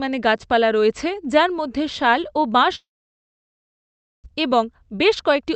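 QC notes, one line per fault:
2.75–4.26 s, long network dropout: The sound breaks off into a brief fading buzz, then near-silence for about 1.4 s. It resumes with 0.88 s simply gone. The likely cause is a stall in arriving packets, which left the delay roughly 0.7 s longer.
4.34–5.47 s, jitter buffer speed-up: The audio plays at 107% speed with its pitch unchanged, so it sounds hurried. The receiver cuts many short pitch-period pieces, around 70 ms in all, to drain the backlog left after the gap.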